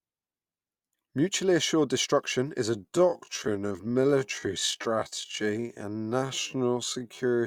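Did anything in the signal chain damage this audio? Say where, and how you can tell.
Yes. A time-stretched section starts at 2.69 s, right after "assured destruction is", and runs to the end: the pace abruptly drops to about 0.57 times normal while pitch holds. This is likely an editing-stage stretch that repeats short segments to fill length.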